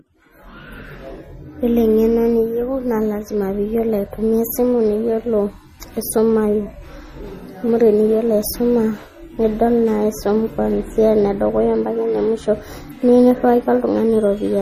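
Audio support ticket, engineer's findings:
MP3 compression artefacts, whole clip, 0 to end. Speech sounds plainly watery and swirly, with metallic chirps on s sounds and smeared onsets. Likely an MP3 encode starved of bits, consistent with roughly 40 kbps. Spectrogram: hard shelf with nothing above 15.3 kHz, and speckled holes where weak frequency lines drop out frame to frame. Waveform: transients blurred, with pre-echo ahead of sharp onsets.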